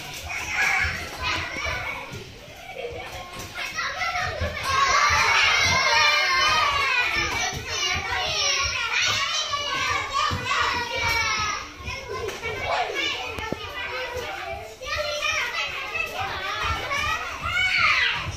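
Loud pop at 1.36–1.59 s and 13.39–13.55 s, each a quick double thump about 15 dB above the audio, likely a voltage pulse from a switch or plug.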